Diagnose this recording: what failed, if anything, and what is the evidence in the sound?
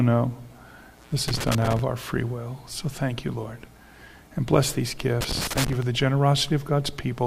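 The analogue wiring failed. Loose connector crackle appears twice, from 1.28 to 1.79 s and from 5.21 to 5.82 s. Each burst is irregular scratching. A worn or dirty contact is making and breaking as it shifts. That chops the signal.

The digital radio path also failed, at the codec stage. DAB burbling appears from 5.95 to 6.04 s as a brief burbling burst. Weak reception lets a small fraction of bit errors slip past error correction. Corrupted sub-band data then jumps in level briefly, which fits a handful of damaged frames.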